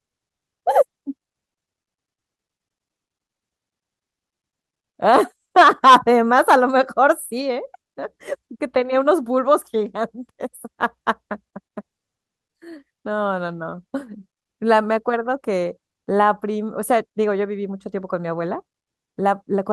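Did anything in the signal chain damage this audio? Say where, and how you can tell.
Yes. Throughout the speech, the pacing feels faintly uneven, as if the talker occasionally stumbles for a split second with no cause in the delivery. That points to clock drift between sender and receiver at the network and jitter buffer stage. The sender's clock runs about 2% slow relative to the receiver's, so the buffer steadily drains and the receiver must keep stretching what it has to avoid running dry.

Those stretches are the repeated timing corrections, spread from 0.32 s to 19.16 s. Each is a tiny hiccup where a short piece is repeated, unevenly spaced but always in the same direction. Overall the stretch plays at about 98% speed, with roughly 400 ms of extra material inserted. That steady lengthening, rather than random gaps, is what identifies a slow sending clock instead of ordinary packet loss.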